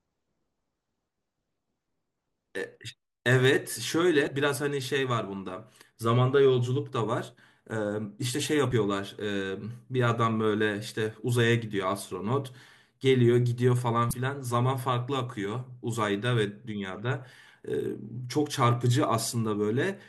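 At 4.24–4.28 s, 8.69–8.72 s and 14.10–14.13 s the speech is broken by brief glitches from damaged data in a compressed stream. Corrupted bytes make the decoder misread frames and lose sync. Each glitch is heard as a chirp, squawk, click or short hole.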